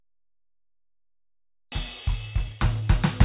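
At 1.72 s, a stretch of music, roughly 0.7 s of it, was dropped while later audio was already queued. This is a skip ahead. Nothing was inserted to cover the loss, so playback jumps straight from one point in the music to a point well past it. The two sides meet almost seamlessly, with no silence, but the phrase breaks off abruptly and the rhythm lurches forward.

From 1.88 s to 3.22 s, a jitter buffer speed-up follows. After the jump, the buffer still held more audio than its target, so it trimmed short pieces of a pitch period or a few at a time, over and over, removing around 200 ms in total. The music plays at 113% speed with its pitch unchanged. The tempo hurries and loses its steady pulse to the end. Through the G.711 A-law call path, all of this sits in a band with nothing above 4 kHz.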